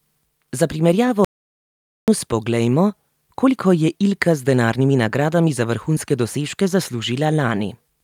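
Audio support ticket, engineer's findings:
Playback stall, 1.25 s to 2.08 s. Speech cuts out mid-flow; about 0.83 s of silence, then resumes. Likely cause: player buffer underrun or blocked playback thread. Output starved until data or the thread came back. Probable component: client player buffering/decode path. Check buffer depth and thread scheduling around that point.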